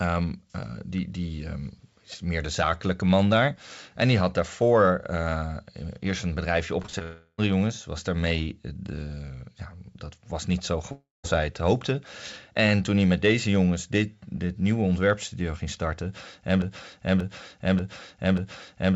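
Just after "eerst een bedrijfje", from 6.82 to 7.03 s, repeated packet loss (robotic sound) sets in: four packets go missing in quick succession, the longest gap 28 ms, and each hole is patched by extending the preceding sound, so about 42% of that stretch is filler and the audio turns choppy with pieces gone.

From 7.03 to 7.40 s the stream then stops altogether, likely a long network dropout. For that whole 0.37 s the receiver keeps extending the last sound as a buzz or hiss, with no silence, and the audio resumes without the lost portion. A second likely long network dropout runs from 10.92 to 11.26 s, between "dat was niet zo" and "zij het hoopte". The stretched last sound fills the first part of the gap, then about 170 ms of silence follows before "zij het hoopte" arrives.

From 16.62 s to the end, a 585 ms fragment plays back to back four times, a broken-record loop that likely comes from a stalled player, encoder or stream resending the last chunk it held. 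Whatever should have played there is lost. Throughout, the call path's G.722 codec at 64 kbps leaves nothing above 8 kHz.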